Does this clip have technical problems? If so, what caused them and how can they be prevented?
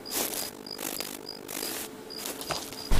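Yes. Overlap-add ripple from 0.5 to 1.65 s: frames were rejoined with windows that don't sum evenly, so the level pulses around 50 times a second, dipping by about 60 dB into a metallic buzz. To prevent it, use a window and hop size that sum to constant gain.

Damaged data in a compressed stream from 2.30 to 2.32 s: corrupted bytes made the decoder misread frames and hunt for the next header, producing a brief glitch. To prevent it, check stream integrity and keep non-audio data out of the audio frames.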